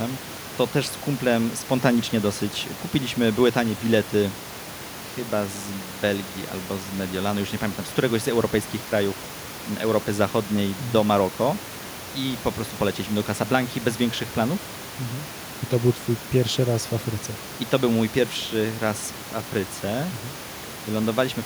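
Speech recording with no technical faults; the room background sits about 17 dB below the voice and belongs to the recording space rather than the signal chain.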